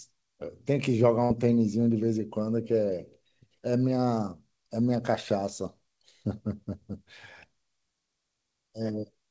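At 1.24 s a burst of packet loss interrupts the speech until 1.32 s. Around 60 ms of audio failed to arrive in time, so the receiver extended the preceding sound into a fading buzz or hiss, then resumed later with that segment gone. The band-limited call path cuts off above 8 kHz, which fits G.722.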